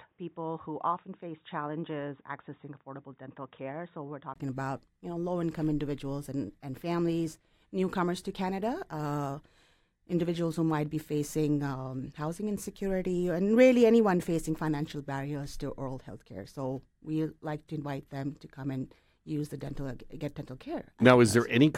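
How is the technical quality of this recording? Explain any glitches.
The recording has one glitch, at the start. From 0 to 4.36 s the sound is dull and boxy, with nothing above 3.8 kHz, a little quieter and with faint added noise, before a 20 ms gap and a clearer sound. That is likely an input switched to a poorer device.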